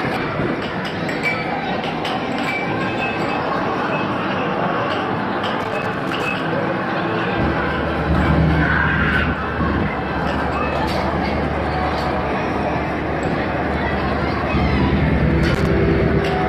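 At 5.60 to 6.40 s and again at 15.44 to 15.67 s there is loose connector crackle: a worn or dirty contact repeatedly breaking and remaking, chopping the signal in bursts of irregular scratching. The waveform shows ragged dropouts and spikes through each stretch, the first about 0.8 s long and the second about 0.23 s. On a spectrogram these appear as clusters of broadband vertical streaks scattered unevenly in time.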